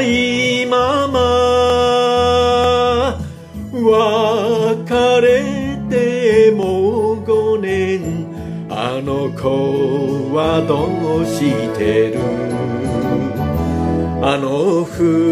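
Sharp single clicks occur at 1.7 s, 2.64 s and 6.63 s, each likely from dropped samples: well under a millisecond of the stream goes missing, so the waveform leaps abruptly. Unlike a dropout, no audible gap or silence follows, just one instantaneous tick.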